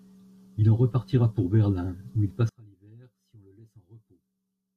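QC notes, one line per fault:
2.49–4.76 s, one channel inverted: right after "où il" the speech drops by about 29 dB to a faint remnant through to the end, not silence as in a dropout. This is likely reversed polarity on one side cancelling the centred content when summed.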